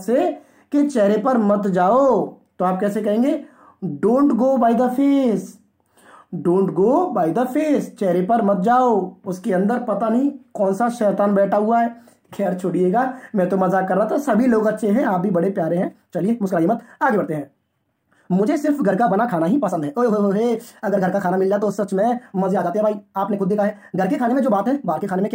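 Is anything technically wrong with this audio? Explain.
Yes. From 15.71 s to the end at 25.35 s, there is a time-stretched section. The pace jumps to about 1.62 times normal while pitch stays put. Software likely squeezed this part by dropping short pieces. It sounds rushed.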